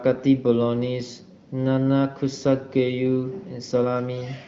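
Speech over an AMR wideband (HD Voice) link, with nothing above about 7.7 kHz as expected for that band limit, and no technical faults are present.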